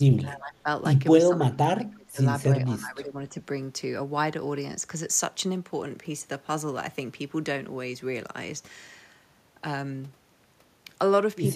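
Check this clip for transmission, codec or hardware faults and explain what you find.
Speech suppressed in double talk at 0.0–0.67 s, 1.19–2.2 s and 2.65–3.35 s: the speech dips and thins in pieces, by about 15 dB, then about 25 dB, then about 15 dB. This is likely an echo canceller turning this talker down while the far side also spoke. The waveform shows carved-out envelope gaps, and the spectrogram shows the upper bands fading.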